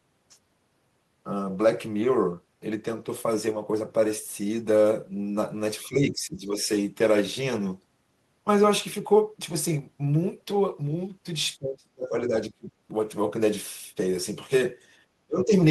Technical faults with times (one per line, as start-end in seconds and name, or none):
5.85-6.70 speech suppressed in double talk
11.58-12.71 speech suppressed in double talk
15.27-15.53 speech suppressed in double talk